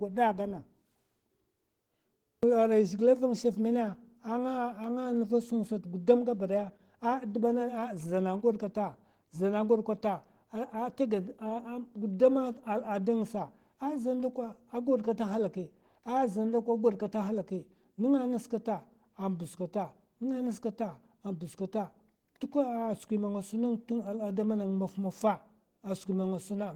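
Opus voice compression runs throughout the speech, at 16 kbps in hybrid mode with 20 ms frames. The linear-prediction layer carries everything below 8 kHz, while a transform layer codes the band above it, reaching up to about 20.2 kHz. At this low bitrate the excitation is quantised coarsely, so the damage is plainly audible: the voice sounds hoarse and faintly robotic.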